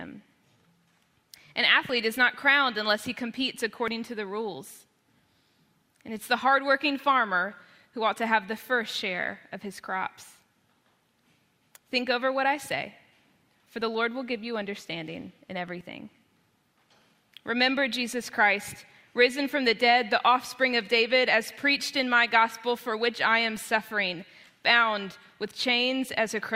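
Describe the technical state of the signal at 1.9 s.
At 1.89 s there is a tiny skip where the sound jumps forward instead of flowing on. This is an overlap between stream segments. The audio is delivered in chunks about 2 s long, and at this joint two chunks claimed the same stretch of time. The player trimmed the supposed duplicate, but that audio had not actually been doubled. Roughly 6 ms of real signal disappeared, and the waveform snaps discontinuously from one point to the next.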